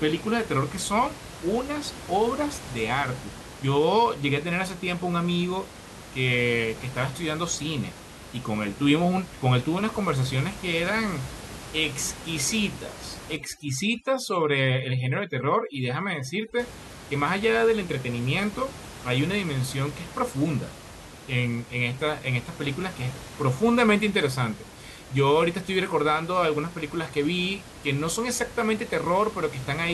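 A speech recording with room noise sitting about 16 dB below the voice. From 13.37 to 16.59 s, overdone noise removal takes over. The background drops and breaks up into twinkling specks. A noise reduction stage is set too hard here. It pulls individual frequency bands down or off whenever they come close to its noise estimate. Quieter parts of the voice fall below that line and vanish with the noise.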